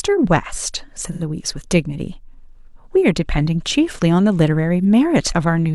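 At 1.07 s the speech smears into a short noisy, phasey patch lasting until about 1.22 s. That's AAC frame loss with concealment: roughly 85 ms went missing, which fits two lost frames, and the decoder papered over the gap by reusing the last good spectrum. A briefer version hits at 4.85 s, about 43 ms, consistent with a single dropped frame, heard as a quick blurry smudge. Neither gap lasts long enough to fade to silence.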